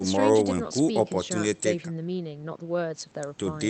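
No technical faults are audible in the speech, which arrives over a call path whose coding limits the top end to about 8 kHz, as is normal for that kind of link.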